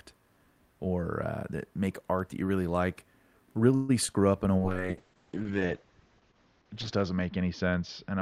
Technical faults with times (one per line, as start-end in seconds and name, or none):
3.75-3.91 call audio freeze
4.07-4.16 short concealed packet loss
4.58-8.21 call bitrate drop